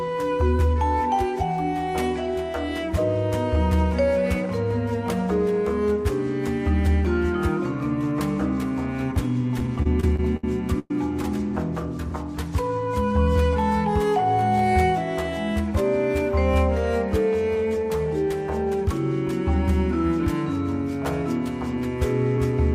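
From 9.59 to 10.44 s the audio stutters through repeated stalls: seven short holds, the longest 65 ms, together about 178 ms of stretched sound. Packets kept arriving late, so the jitter buffer kept running dry. Nothing drops out, but the many brief catches make the passage drag.

At 10.79 to 10.91 s a single call audio freeze holds the sound as a fading buzz for about 109 ms, ending in 20 ms of silence before resuming where it stopped. This is likely a one-off packet hold-up, unlike the stutter's string of short catches.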